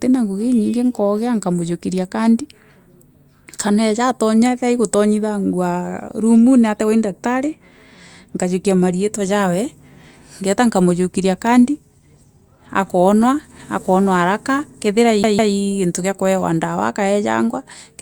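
A speech clip with one fault: near the end, from about 15.23 s to 15.54 s, the disc gets stuck on one turn. The same chunk of roughly 154 ms plays twice over, each pass cut off by a tiny mute where the laser jumps back a track, giving that quick, even stutter you get from a scratched CD. It clears just before "gintu kia kuewa dawa" carries on normally.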